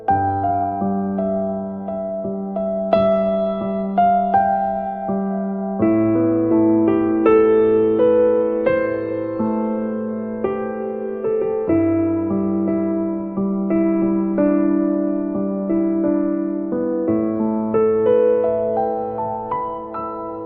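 A call bitrate drop runs from 13.1 s to 17.87 s. The connection's bandwidth estimate fell, so the encoder was forced to spend far fewer bits, and the sound fits a fall from around 64 kbps to about 28 kbps. For roughly 3.2 s at the lowest point, the audio band narrows from 20 kHz to 8 kHz, leaving it muffled, with a coarse, watery texture, until the bitrate climbs back.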